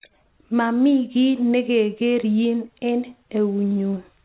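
Listening to this speech recording, nothing stood out as a technical problem.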